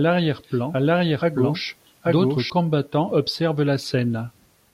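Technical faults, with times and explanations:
0.0–2.5 s, doubled audio track: the speech repeats itself about 0.7 s later at roughly equal loudness, dry and cutting off abruptly, likely from a second, slower capture path mixed in.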